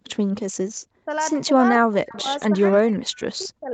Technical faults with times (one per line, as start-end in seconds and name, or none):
1.01-1.10 speech suppressed in double talk
1.52-2.26 speech suppressed in double talk
2.08-2.22 echo leak
2.72-3.74 speech suppressed in double talk